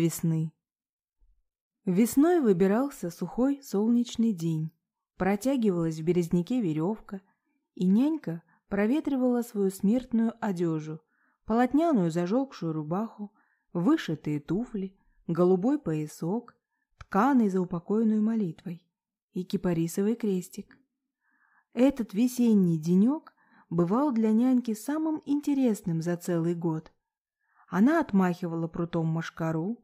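No technical faults are audible.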